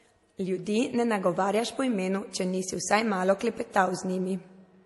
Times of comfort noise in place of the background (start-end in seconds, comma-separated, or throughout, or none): none